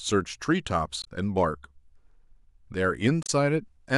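At 1.02 to 1.08 s and again at 3.23 to 3.30 s the speech breaks into a short garbled blip. That's damaged data in the compressed stream: the decoder hits bad frames, loses sync and hunts for the next valid header before playback recovers.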